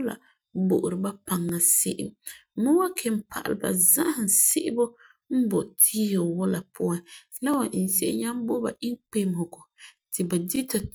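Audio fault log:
1.49–1.51 s, 4.51–4.54 s (after "pa'alɛ za'ahum"), 7.54–7.56 s (after "wula puan la"), 10.56–10.58 s: overlapping chunks. Every 3.0 s a new chunk begins early, so about 21 ms of speech plays twice, and each join is heard as a brief stutter.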